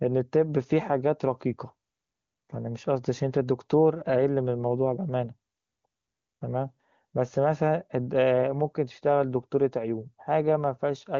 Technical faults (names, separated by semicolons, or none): none